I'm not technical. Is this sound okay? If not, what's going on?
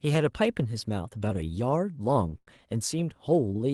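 No, not quite. Around 2.29 to 2.35 s, and again from 2.38 to 2.58 s, the speech briefly hangs. These are short stalls from a late packet: a piece of the call audio arrived late, so the receiving end held the last sound until it caught up, then carried on from the same spot. Nothing is lost, but a sound drags out a little, the second time for nearly a tenth of a second, with a faint buzz or dip.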